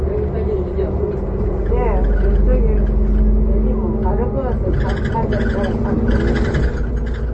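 From start to finish the audio has a watery, swirling quality, with metallic chirps on bright, noisy detail and softened attacks, and everything above about 8.3 kHz is missing. This is likely MP3 compression at a very low bitrate, which fits about 32 kbps. Short of bits, the encoder cut the treble at a fixed point and dropped weaker frequency components, which flicker in and out from frame to frame and cause the swirl.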